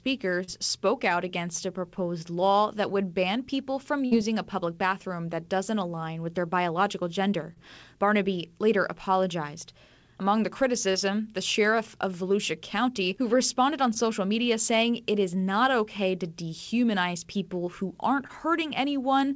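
At 0.44 s the speech has a brief smear, a short concealed packet loss: about 40 ms of audio arrived too late, and the receiver patched the gap by extending the preceding sound. At 4.05 to 4.13 s a held buzz or fading hiss replaces the speech. This is a burst of packet loss: about 60 ms went missing in a row, so the receiver stretched the last sound while lowering it before the speech picked up further on. The same brief smears or wobbles return at 7.53, 10.92, 13.94 and 18.27 s, each one another short concealed packet loss of about 20 ms. Across the whole clip nothing is heard above 8 kHz, which fits a G.722 call codec running at 64 kbps.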